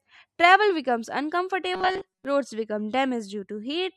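From 1.74 to 2.25 s, just before "roads become", the speech turns into a rigid metallic buzz at 188 Hz. This is robotic sound from repeated short buffers. Late audio was likely covered by repeating a 5.3 ms chunk for most of that span.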